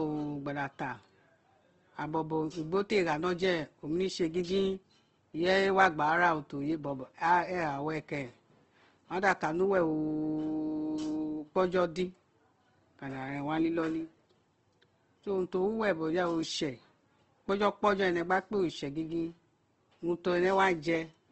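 Throughout the speech, the sound is grainy and rough, with nothing above 8.2 kHz. The likely cause is Opus compression at a low bitrate, one that fits about 16 kbps. Starved bands get filled with folded or noisy content, so harmonics turn gritty.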